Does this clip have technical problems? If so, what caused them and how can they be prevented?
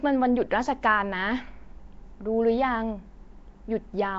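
Yes. Throughout, the speech has a rough, hissy halo and a smeared, underwater quality, with nothing above 7.7 kHz. This is likely Nellymoser compression. That coder spends very few bits per block, so weak bands are replaced with noise. The damage fits roughly 32 kbps. Record with a modern codec such as Opus, or capture uncompressed audio.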